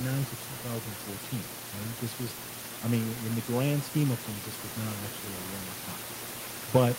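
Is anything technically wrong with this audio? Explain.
No, nothing's technically wrong here; the only extra sound is the room's own background noise, sitting about 13 dB below the speech, which is just part of where it was recorded.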